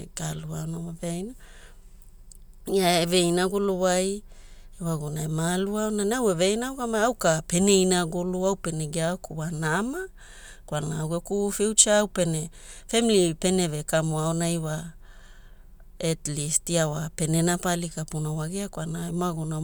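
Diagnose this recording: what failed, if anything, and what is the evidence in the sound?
Nothing failed: listening across the recording, no stage in the chain from capture to playback leaves any audible defect.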